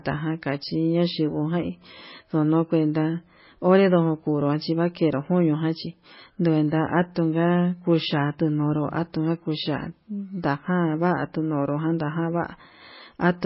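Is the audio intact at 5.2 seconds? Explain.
No. At 5.2 seconds, as throughout the clip, the speech carries heavy damage from what is likely MP3 compression. Starved of bits, the encoder has cut off everything above about 5.6 kHz and zeroed weak frequency lines that flicker on and off between frames, which fits a bitrate near 17 kbps. The result is dull, watery, swirling speech, with metallic chirps on s sounds and smeared consonant attacks.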